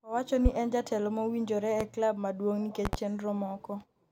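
A loud pop cuts through the speech at 0.46 to 0.49 s. Its peak stands roughly 20 dB above the signal. A second single pop follows at 1.81 to 1.84 s, about 15 dB up. From 2.85 to 2.96 s come two pops in quick succession, at a similar level. Each is a sharp, brief thump. The speech carries on underneath. The likely cause is a sudden voltage spike, from a switch, plug, static or driver glitch.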